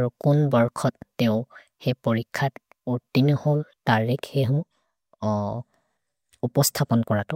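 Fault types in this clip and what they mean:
No audible faults: nothing in the recording points to a defect in capture, processing or playback.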